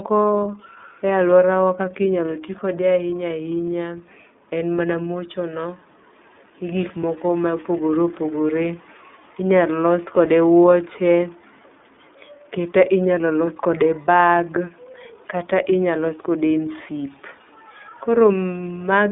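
Throughout, the speech passes through the iLBC codec, likely at about 13.3 kbps with 30 ms frames. Nothing above 3.7 kHz survives, and the voice sounds plainly rough and synthetic.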